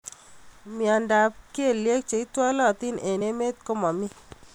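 Compressed frames skipped at 3.20 s in this speech clip: the audio jumps forward by roughly 30 ms, about one frame's worth, which fits a codec frame of around 26 ms. That frame was either missing from the file or rejected by the decoder as damaged.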